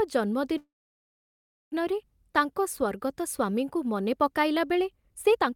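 At 0.57 s the speech freezes into a brief buzz or hiss, then about 1.04 s of silence until 1.73 s. This call audio freeze likely came from delayed packets emptying the jitter buffer. From 4.88 s to the end, a time-stretched section runs 1.56 times faster. Pitch holds, but the speech sounds rushed, likely from pieces dropped to shorten it.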